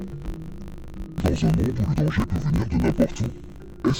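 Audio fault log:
throughout: interleaved audio read as planar. Each 20 ms block of alternating left and right samples is split down the middle and played as two half-speed channels, so the content inside every block drops an octave (12 semitones) while the overall pace holds. With blocks this short, the result sounds dull and robotic, with a buzz at the 50 Hz block rate. On a spectrogram, harmonics appear compressed downward, with vertical striping every 20 ms; the waveform shows discontinuities at each block edge.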